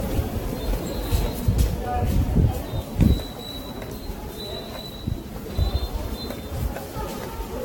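Likely generation loss throughout: repeated Vorbis re-encoding, about ten passes at a rate consistent with 67 kbit/s, leaves these sounds swirly, hollow and blurred, with nothing above 18.1 kHz.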